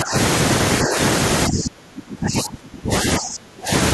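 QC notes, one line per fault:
0.02–0.15 s, 0.84–0.96 s and 1.48–3.71 s, speech suppressed in double talk: the speech dips briefly, slightly in the middle event, then sinks by up to about 30 dB for roughly two seconds. The likely cause is an echo canceller muting the near talker while both sides spoke.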